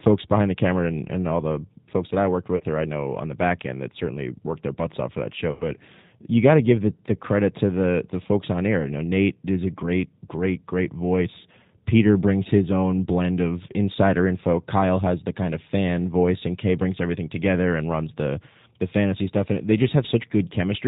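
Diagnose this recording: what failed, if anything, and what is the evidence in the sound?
G.729 codec damage runs through the whole speech clip, from the codec stage. Nothing above 4 kHz survives, so sibilants sound dull, and vowels have the rough, slightly synthetic grain of a 10 ms frame model that rebuilds the voice from a vocal tract filter, a pitch predictor and a handful of pulses per subframe. At 8 kbit/s, which fits G.729A, the damage is plainly audible rather than subtle.

VoIP packet loss, concealed by the speech codec, occurs at 2.57 to 2.63 s and 5.52 to 5.64 s. The failure is in the network, and the decoder covers it. About 30 ms went missing in the first gap, pointing to a single packet, and about 90 ms in the second, pointing to three. The decoder stretched the last pitch and filter into a buzzy tone or coloured noise that fades, and the voice stays weak briefly after each gap while the frame-to-frame state recovers.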